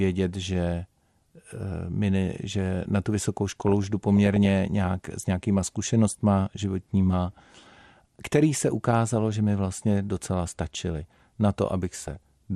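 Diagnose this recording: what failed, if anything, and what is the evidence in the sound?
The speech is dull throughout, with a gurgling, granular texture typical of MP2 compression, likely at the codec stage. The damage is plainly audible and fits a low bitrate around 80 kbps. Too few bits switch upper sub-bands off and leave the remaining bands coarsely quantised.

DAB burbling appears as bursts of burbled noise from 3.52 to 4.48 s, after "že na tu vysokou" and before "nějak s nějakýma zkušenostma", and from 12.01 to 12.31 s, after "vlastně docela stačily na". Transmission bit errors slip past error correction and corrupt MP2 samples, putting short blips of noise into single sub-bands. The errors are sparse in the first burst and heavier in the second.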